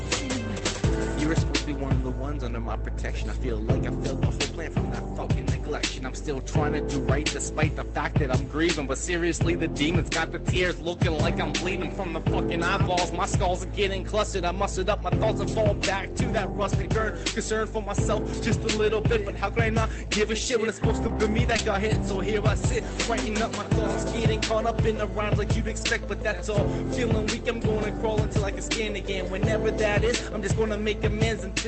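Between 21.08 and 22.16 s, ten separate 20 ms frames go missing and are each rebuilt from error correction: the following packet carried a low-bitrate backup copy, and the decoder played it in place of the lost one. Nothing drops out. Instead, that second of audio turns briefly grainy and noisier in a flickering pattern. The continuity is what tells this apart from concealment, since the rebuilt frames hold the real sound, only coarser.

At 21.56 to 21.60 s, inside that burst, comes a short concealed packet loss. Here 20 ms never arrived and no copy was usable, so the decoder invented audio by extending what came before and then cross-fading back. The real 21.58 to 21.60 s frame is itself a rebuilt copy, so the seam lands on rough audio. The result is a small smear or wobble rather than graininess, because the filled stretch is a guess, not degraded original material. The call codec's band limit at 8 kHz, consistent with Opus at around 32 kbps, stays constant through both faults.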